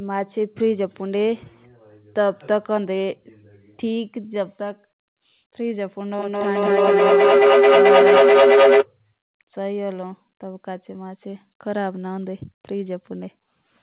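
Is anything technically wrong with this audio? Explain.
Yes, there is a feedback howl from 6.1 to 8.88 s. Two devices on the same call in one room form a loop from microphone to loudspeaker and back, and each trip adds level. A tone near 400 Hz builds, with repeats roughly every fifth of a second, and peaks about 9 dB above the speech. Ordinary acoustic echo would fade with each repeat; this grows and narrows to one pitch. Like everything here, it is band-limited below 4 kHz by the call codec.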